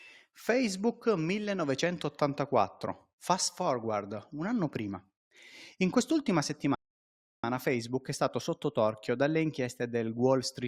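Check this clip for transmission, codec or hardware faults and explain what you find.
Two faults are present in this speech clip.

From 2.32 s to 10.51 s, clock drift buffer slips produce a click about every 2.5 s, roughly four in all. The likely cause is two devices whose clocks differ by roughly 70 parts per million, so the buffer between them drifts until a handful of samples is dropped or repeated. The strict regularity separates this from random packet-loss glitches.

From 6.75 s to 7.44 s, a rebuffering stall cuts the speech to silence for about 0.69 s. The player ran out of downloaded audio and paused until more arrived, then resumed exactly where it stopped. Unlike a dropout, no speech is missing. The gap only adds time.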